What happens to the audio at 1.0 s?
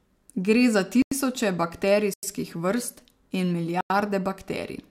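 A block of digital silence runs from 1.02 to 1.12 s: about 93 ms of silence, fitting a 4096-sample buffer left unfilled, with abrupt edges.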